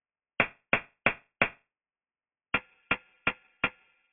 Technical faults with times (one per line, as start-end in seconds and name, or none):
0.00-4.13 aliasing